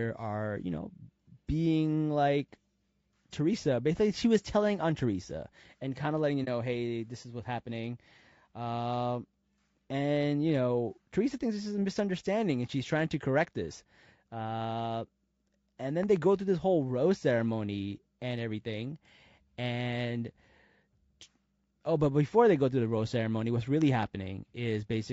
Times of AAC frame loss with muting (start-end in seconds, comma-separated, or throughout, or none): 6.44-6.48